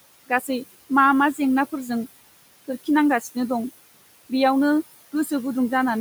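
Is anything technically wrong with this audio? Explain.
Yes, there are two related problems.

Throughout the clip, the background pumps: it drops away in the gaps and swells back up under the talking. These are noise suppressor artifacts. The suppressor pulls down the bands it judges to be steady noise, by about 19 dB here, and recalculates frame by frame. The room noise it is acting on sits about 17 dB below the speech.

From 0.29 to 0.49 s, just before "मा मा जेंनाफोरजों", a stretch of the speech goes briefly faint and swallowed, as if turned down with the background. This is speech cut by the noise suppressor. It mistook low-level parts of the speech for noise and attenuated them along with it, by as much as about 11 dB at the deepest point. The affected sound adds up to about a tenth of a second within that window.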